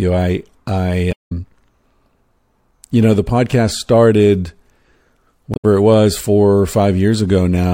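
Right after "I I", 1.09 to 1.32 s, and again 5.51 to 5.65 s before "it was", damaged data in the compressed stream throws the decoder off sync, giving brief glitches.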